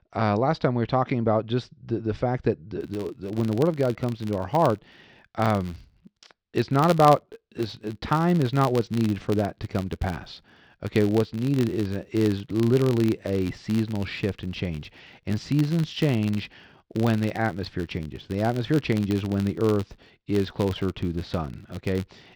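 From 2.81 s to the end, the filter restarted on every block. Each block starts from silence, so a buzz at 86.1 Hz tracks the speech level. This fits a 512-sample buffer.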